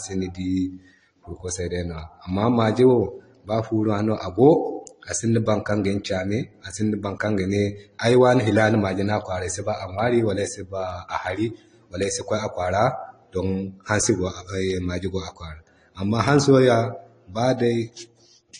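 Transcoding between lossy codecs runs throughout: the speech stops at 10.1 kHz and carries stacked smearing, likely from a low-bitrate AAC encode re-coded as MP3.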